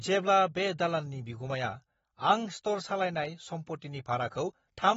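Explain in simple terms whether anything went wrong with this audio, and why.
Throughout the speech, nothing comes through above 7.6 kHz, so it sounds dull and a bit warbly, likely from heavy AAC compression.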